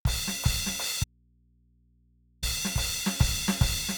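An audio dropout to a faint residue runs from 1.04 s to 2.43 s, taking out about 1.38 s of the music. The loss is abrupt at both ends, and the gap is not silent: a low mains hum sits there, roughly 35 dB below the music. The likely cause is the signal feed breaking while the input after it stayed live and open, so the hum carried on through the gap until the music cut back in.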